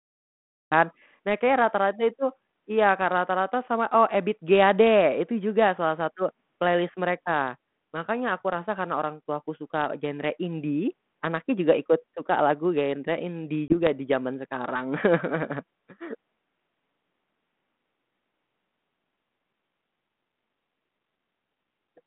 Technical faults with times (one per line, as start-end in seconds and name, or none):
0.00-0.72 cut-off start
13.68-13.87 packet loss on an ADPCM call